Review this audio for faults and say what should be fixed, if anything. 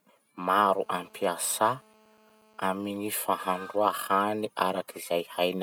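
From 0.47 to 2.78 s there's GSM phone buzz: a harsh, raspy 217 Hz drone with lots of harmonics, sitting about 32 dB under the speech and holding steady, as a phone on a call would. The audio circuitry is rectifying the handset's transmit bursts. Next time, keep phones switched off or well away from the mic, cables and interface.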